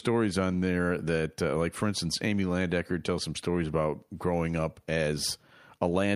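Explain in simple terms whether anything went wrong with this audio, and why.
Nothing went wrong here: the speech recording comes across as technically sound, with no audible glitch, dropout or distortion anywhere in it.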